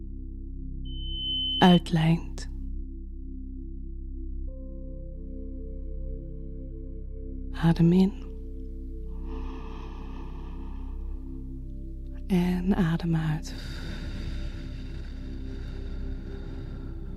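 Loudspeaker feedback squeal runs from 0.85 to 1.84 s: a microphone picked up the loudspeaker it was driving, and the loop gain rose above one at 3 kHz. A pure tone there swells over about half a second into a squeal sitting roughly 10 dB above the sound.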